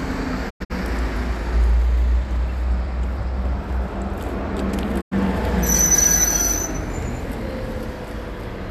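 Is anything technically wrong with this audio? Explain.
Yes, there are two digital broadcast dropouts. From 0.49 to 0.72 s the sound fades out over about 20 ms in a few short holes, with the longest gap 96 ms. At 5.00 to 5.13 s it mutes once for about 96 ms. Each time the receiver muted on bad frames, so that stretch of audio is simply gone.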